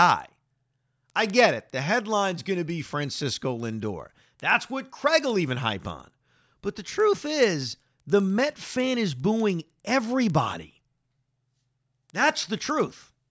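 Throughout the speech, a resampler restarted on every block leaves a steady tick every 100 ms, a 10 Hz pattern that fits a conversion from 44.1 kHz down to 16 kHz done in separate chunks. Each chunk was converted as if nothing lay beyond its edges, so the filter had no true neighbouring samples to work with at each boundary. The resulting small discontinuities repeat at the block rate and sound like a rhythmic clicking that rides on the voice.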